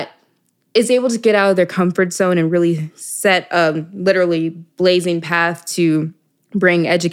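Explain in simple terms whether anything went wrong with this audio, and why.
Nothing went wrong with this audio, because there are no faults to hear anywhere in it.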